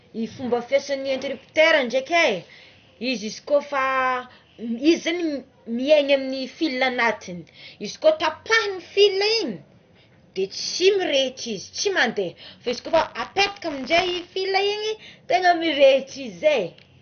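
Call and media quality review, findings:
MP2 compression, whole clip: speech dull, nothing above 6.5 kHz, gurgling granular distortion. Likely MPEG Layer II at a low rate, consistent with about 48 kbps, starving upper sub-bands.

Buffer tearing, 12.64 to 14.37 s: 100 Hz robotic buzz. Writer and reader crossing each period, splicing in a small slice of audio about 30 ms stale.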